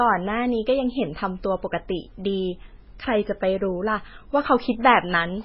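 From start to end, the speech is dull and watery. Nothing sounds above 5.5 kHz. S sounds chirp and swirl, and onsets smear. The likely cause is heavy MP3 compression, which fits a very low bitrate near 16 kbps. Starved of bits, the encoder cut the treble and dropped weak detail.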